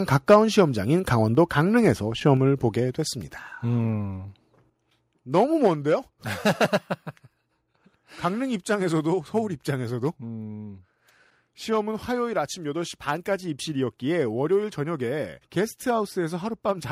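A speech clip that opens with a harsh, crackling edge on the loudest syllables from 0.3 to 0.6 s, where the tops of the waveform are flattened. This is microphone overload. The input was likely driven about 5 dB past the converter's ceiling, so a small share of the samples in those peaks hit the converter's limit and were cut off square. That squaring adds the gritty distortion heard on the peaks.

While the distortion is still sounding, at 0.34 s, the level drops suddenly by about 3 dB. Both the voice and the background fall together. Three more abrupt drops follow: about 2 dB at 1.35 s, about 4 dB at 2.37 s and about 3 dB at 5.67 s. These are the microphone volume stepped down. Each one is likely call software reacting to a too-loud input by cutting the device's input gain in a single step rather than fading it smoothly, which is why the sound seems to shrink in distinct stages.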